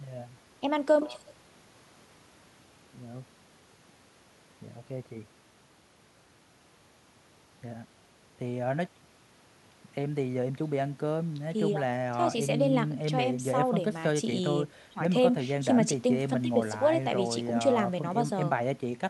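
No technical faults occur at any point in the speech, so there is nothing to place in time order.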